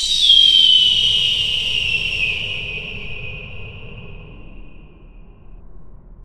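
No technical faults are audible anywhere in the recording.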